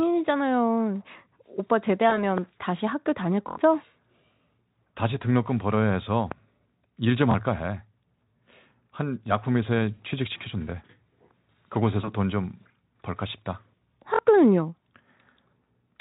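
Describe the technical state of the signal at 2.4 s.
A loud pop sits at 2.38 to 2.40 s, likely from a brief voltage pulse, such as a switch, plug or static discharge, entering the signal chain. It lands as a single sharp click well above the speech level, with the Speex-coded speech continuing underneath.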